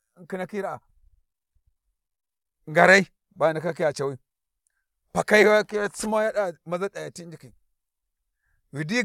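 No technical faults can be heard anywhere in the speech recording.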